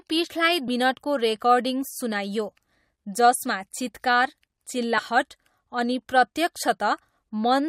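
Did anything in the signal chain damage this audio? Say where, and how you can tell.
Yes. At 4.98 to 5.00 s the speech is broken by a brief glitch lasting about 20 ms, a sound that belongs to no part of the recording. This is damaged data in a compressed stream, at the codec or storage stage: some of the compressed bytes there were lost, zeroed or overwritten. The decoder misread those frames, lost sync and had to search for the next valid frame header, and that garbled decode is what produces the glitch.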